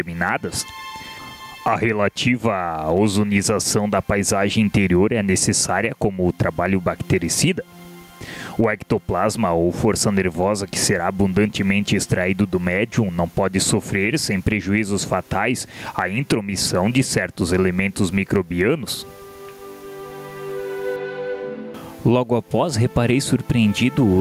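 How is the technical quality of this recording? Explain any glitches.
The technical quality is compromised by gain pumping throughout. The gain swings by around 15 dB, ducking under each loud sound, leaving the dynamics squashed. The likely cause is input gain set far too high, with a fast limiter clamping down on peaks. On a waveform, peaks look flattened and gaps fill up; a spectrogram shows the noise floor brightening and dimming in step with loud passages.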